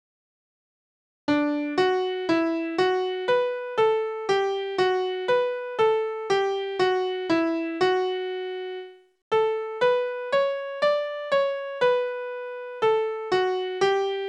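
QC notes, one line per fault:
The signal shows no audible technical faults at any point.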